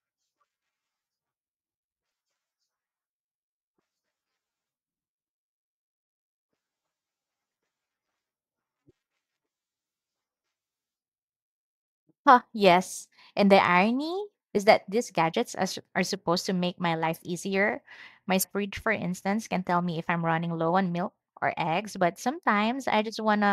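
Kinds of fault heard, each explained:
Damaged data in a compressed stream: two short glitches cut into the speech, at 2.08 to 2.10 s and 18.40 to 18.45 s, just before "fridge for instance can". Corrupted bytes make the decoder misread those frames, losing sync until it finds the next valid header.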